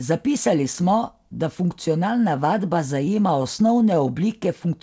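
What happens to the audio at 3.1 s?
Repeated stalls (stutter) run from 3.06 to 4.11 s: late packets repeatedly drain the jitter buffer, and the receiver stretches the last sound through nine brief gaps, so the audio drags and stutters.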